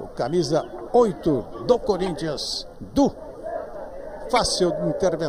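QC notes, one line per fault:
2.04–2.08 s, corrupt frame decoded: a short chirpy blip peaking around -20 dBFS, spanning what sounds like a couple of damaged frames. The decoder played them anyway, so misread gains put energy at the wrong frequencies.
4.36–4.38 s, corrupt frame decoded: a louder squeak, peaking around -10 dBFS, lasting about one frame's worth. It's the same mechanism, with flipped bits spraying stray energy for that one frame.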